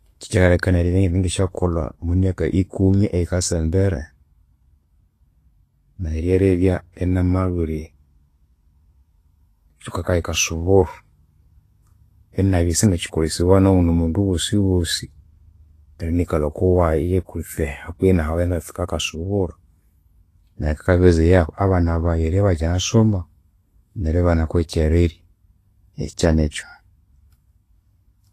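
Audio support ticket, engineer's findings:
Hissy, grainy treble throughout the speech, with roughened tones and softened consonant attacks; nothing above 14.2 kHz. Likely Vorbis compression at a low setting, around 30 kbps. The encoder quantises the upper band so coarsely that fine detail turns into noise of similar energy, and the low-pass removes everything above the cut-off.

Short hiss from 9.89 to 9.94 s, about 51 ms, just before a sharp onset, which sounds smeared. This is pre-echo from the same transform codec. The attack falls late in a block, and quantisation noise spread evenly across that block fills the quiet stretch ahead of it.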